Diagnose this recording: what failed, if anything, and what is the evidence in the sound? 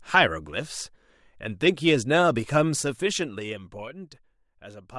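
Zipper noise from a gain stage at the driver or buffer level: between 2.75 and 4.08 s the speech drops by roughly 15 dB in unsmoothed steps, around 50 a second, each leaving a small click. Unlike a smooth fader move, it produces an audible ticking throughout the change.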